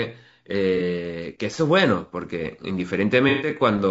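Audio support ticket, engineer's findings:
Rough, grainy speech throughout, with noise filling the gaps between harmonics and a thin, synthetic-sounding top band. Likely cause is low-delay AAC compression (AAC-ELD style). Its short frames resolve pitch harmonics poorly, and the damage fits a low bitrate, around 32 kbps.

Smeared, noisy patches at 0.77–0.81 s and 3.29–3.49 s. This is AAC frame loss with concealment: the decoder rebuilds the missing audio from the last good spectrum. The first gap is 30 ms, which fits a single dropped frame. The second is 120 ms, roughly four frames.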